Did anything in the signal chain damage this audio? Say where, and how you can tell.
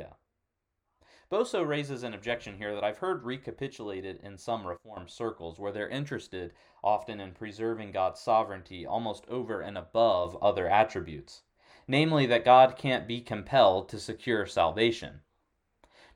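Yes. There are two sudden gain jumps. At 4.77 s the speech and its background noise drop together by about 12 dB and return at 4.97 s. At 10.25 s both step up by about 6 dB and stay there to the end. Each change is instant, with no attack or release ramp. The noise floor shifts by the same amount as the speech, which rules out a compressor or AGC. The likely cause is a digital gain setting or bit shift applied in the driver or processing stage without smoothing.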